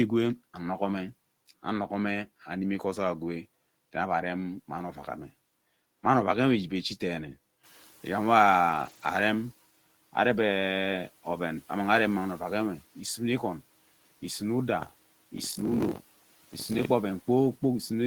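At 7.63 s the noise suppressor is catching up. The room noise, which is not itself a fault, jumps by about 12 dB at roughly 7.5 s and settles about 26 dB below the speech. The suppressor's estimate of that noise still reflects the quieter level before the jump. For the next 1.88 s the new noise passes with little reduction. As the estimate adapts, it is pulled down by about 8 dB, and the noise is back under control by 9.51 s.

Inside that window, from 8.69 s to 9.07 s, lost packets are rebuilt from error correction. Packets went missing, but each following packet carried a low-bitrate copy, and the decoder played those copies. There is no gap. The pattern fits several separate losses that together cover about 200 ms of rebuilt audio. Those stretches sound rougher and grainier than the surrounding speech, with a noisy, coarse texture layered over the suppressor's adaptation.

From 14.81 s to 16.86 s there is buffer tearing. 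The program writing a ring buffer and the hardware reading it have drifted until they cross within every period. About a fifth of each buffer replays audio from roughly 70 ms earlier, joined hard on both sides. The result is a steady robotic buzz at 46.9 Hz, which fits a 1024-sample buffer. It rides on the speech and is present only while there is signal.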